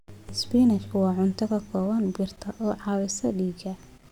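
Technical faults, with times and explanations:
No technical faults can be heard in this speech recording. Nothing in the sound breaks, drops out or is interrupted at any point.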